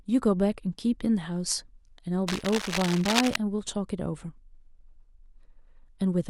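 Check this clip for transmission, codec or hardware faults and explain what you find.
One hardware fault is audible. From 2.27 to 3.37 s, cable scratch noise: a dense, uneven scratching and rustling sits over the speech, only slightly quieter than it. This is likely a worn cable, connector or control being moved, its contact resistance jumping rapidly and injecting bursts of noise.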